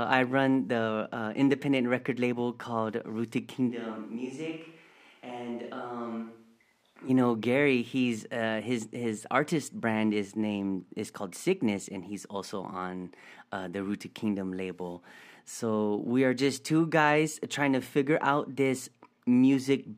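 At 3.71 s the speech suddenly turns roomy and hollow, with less bass. The level drops by about 10 dB. Background noise sits only about 35 dB below the speech. At 7.08 s the close, full sound returns just as abruptly. This is likely a switch to a distant microphone. The close microphone's feed dropped out, so a mic further from the talker carried the signal. That mic hears more of the room's reflections and noise, and less of the voice.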